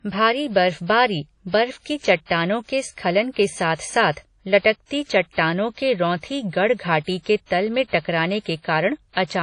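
A speech recording, likely run through low-bitrate WMA compression that fits about 32 kbps, leaving nothing above 10.1 kHz and plainly audible ringing, washy smearing and breathing hiss throughout.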